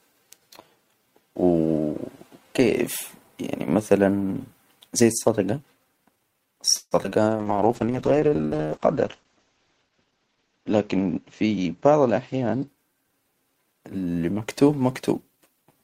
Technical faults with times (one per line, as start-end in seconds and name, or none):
6.77-6.93 call audio freeze
7.03-7.13 short concealed packet loss
7.28-13.24 call bitrate drop
11.56-13.04 jitter buffer speed-up